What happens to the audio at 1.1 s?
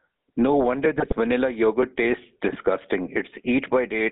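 GSM bit errors hit the speech from 0.96 to 1.13 s. Corrupted filter, pitch and gain values distort the spectrum and level frame by frame, producing squawks, pops and gargling. Underneath, the GSM full-rate codec is audible throughout. Its pulse-driven vocal-tract model gives a buzzy, gravelly roughness in a band of roughly 150 Hz to 3.7 kHz.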